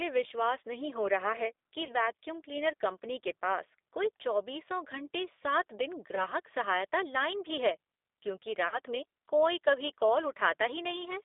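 From the start to the end of the clip the speech carries G.729 codec damage that is plainly audible. The sound is confined to roughly 300 Hz to 3.6 kHz, and it has the slightly rough, synthetic texture of a low-rate coder that rebuilds the voice from a vocal tract filter, a pitch predictor and a sparse pulse excitation. That character fits G.729A at 8 kbit/s, where only a coarse model of the voice survives.

VoIP packet loss concealed by the speech codec appears three times. From 1.85 to 1.95 s, about 40 ms of audio, consistent with two packets, is missing. The decoder fills the hole by extending its last pitch and filter at falling gain, which stretches the sound briefly into a fading buzzy tone or coloured noise. A shorter loss of about 20 ms, one packet's worth, occurs from 6.15 to 6.26 s. Another 40 ms loss runs from 8.68 to 8.79 s. In each case the speech stays weakened for a short while after real audio resumes.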